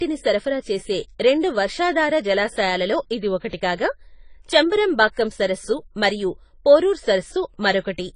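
Throughout the speech, the sound is dull and smeared, with nothing above 10 kHz and a watery, warbling fizz on sibilants. This plainly audible AAC compression fits AAC-LC at a bitrate around 24 kbps, likely. Unlike a plain low-pass filter, it also leaves swirling artefacts inside the remaining band.

From 3.50 to 3.53 s, right after "రెండు వర్షాధార జలాశయాలలో ఇది", a short hiss runs about 32 ms ahead of an attack. From 5.12 to 5.17 s, just before "సరస్సు మరియు పోరూర్", the same pre-echo spreads about 53 ms. Quantisation noise sized for the loud onset fills the quiet start of the transform block, so each attack sounds softened. Unlike a click or dropout, this hiss arrives before the onset and builds into it.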